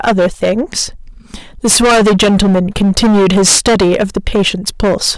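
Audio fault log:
throughout, hard clipping: the speech is driven about 21 dB past what the stage can pass, so roughly a fifth of all samples are sliced flat and every loud syllable turns to harsh, buzzy fuzz. The abrupt flat tops, unlike soft saturation's rounded peaks, spray high harmonics.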